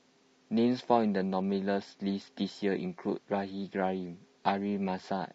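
Likely low-delay AAC compression at a bitrate around 32 kbps, whose short frames resolve harmonics poorly, leaves the speech plainly rough and grainy throughout, with noise between harmonics.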